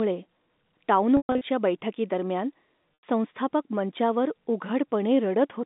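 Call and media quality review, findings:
Held, buzzy stretch at 1.17–1.41 s: sound freezes on a repeated pitch cycle and fades toward silence before a short cross-fade back. Packet loss with pitch repetition: 180 ms lost across 240 ms, longest run 120 ms, fitting 30 ms packets.

Briefer buzzy hold at 2.95–3.03 s over the 200 Hz–3.7 kHz G.711 A-law telephone band. Same packet loss with pitch repetition: about 90 ms missing, bridged by looping the last pitch period.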